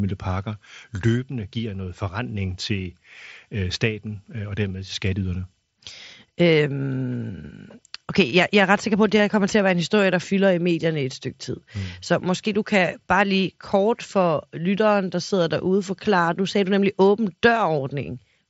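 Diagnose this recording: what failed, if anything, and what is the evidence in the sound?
At 9.18 s, between "sikker på at det" and "her kommer til at", there is a brief concealed Bluetooth headset packet loss. The failure sits in the wireless link between headset and phone. A gap of about 15 ms was filled by repeating the best-matching stretch of the preceding waveform. That length fits two lost frames. Because two frames were lost in a row, the patch is heard as a short buzzy tone with a small warble where real audio returns. It stands against the light graininess of the mSBC codec.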